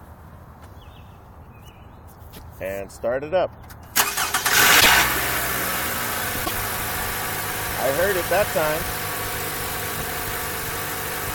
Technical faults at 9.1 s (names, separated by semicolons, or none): none